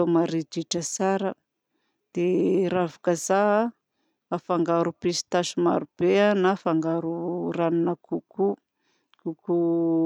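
A disc blemish overwhelmed error correction once per turn, so between 3.66 and 4.13 s three CD scratch ticks, each under a millisecond, click through.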